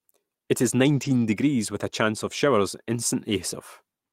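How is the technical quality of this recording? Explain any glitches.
The recording has one glitch. From 0.93 to 1.23 s, a lost packet was rebuilt from error correction: the decoder played low-bitrate backup copies, so there is no gap, but the sound turns rougher and noisier. A spectrogram would show smeared, grainy texture there, not a silent hole.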